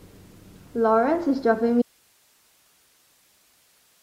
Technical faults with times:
1.82-4.02 audio dropout to a faint residue

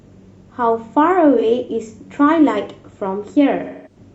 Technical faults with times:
1.37-1.43 AAC frame loss with concealment
3.63-3.96 AAC frame loss with concealment

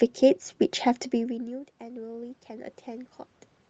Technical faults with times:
1.13-2.83 automatic gain rising

